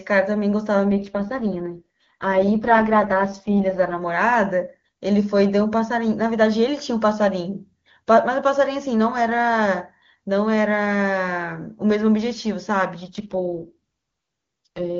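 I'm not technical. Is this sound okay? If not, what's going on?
No. Twice, the phone network forced its HD Voice codec down to a much lower quality setting, an AMR rate drop, from 0.88 to 4.02 s and from 13.04 to 14.99 s. There the speech turns rough and buzzy, almost robotic, without cutting out.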